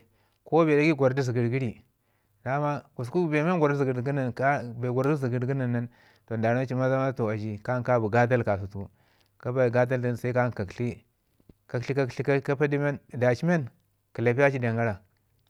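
Listening through the speech, nothing stood out as a technical fault at any point.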